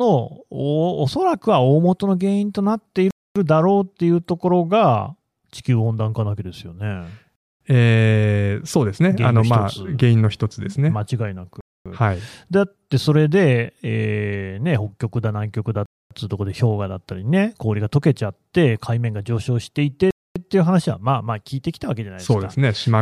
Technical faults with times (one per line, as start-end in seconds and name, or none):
3.11-3.36 gap between chunks
7.36-7.61 gap between chunks
11.61-11.86 gap between chunks
15.86-16.11 gap between chunks
20.11-20.36 gap between chunks